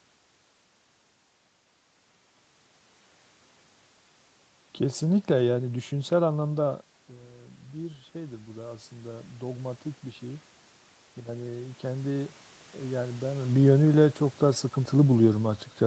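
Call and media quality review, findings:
Automatic gain rising, 7.73–10.51 s: AGC slowly lifts speech and room noise together by about 6 dB after input drops about 12 dB, following talker movement around 6.5 s.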